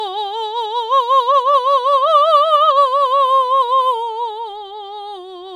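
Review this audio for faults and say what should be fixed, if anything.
Nothing here needs fixing; the music comes through without any technical faults to flag.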